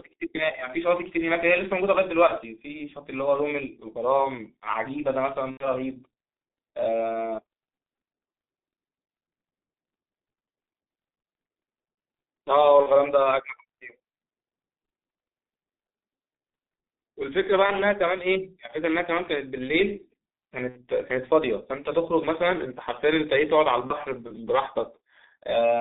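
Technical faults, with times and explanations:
Throughout, G.723.1 codec: the speech sounds muffled and hoarse, with smeared consonants and a rough, grainy texture. Nothing passes below 200 Hz or above 3.7 kHz, which strips the body and the sibilant detail. The heavy damage fits a very low-rate coder near 6 kbit/s. It describes the voice with a coarse model refreshed only once per 30 ms block, so fast articulation blurs together between updates.
2.27–2.34, 5.51–5.70, 12.83–12.88, 17.66–17.72, 20.69–20.82 and 23.87–23.95 s, VoIP packet loss concealed by the speech codec: each gap is filled with a brief drawn-out sound that sags in level. The decoder repeated its last pitch and spectral shape at falling gain. Most gaps fit one lost 30 ms block. The longer ones at 5.51 s and 20.69 s point to three and two in a row, and the voice stays weakened briefly after each.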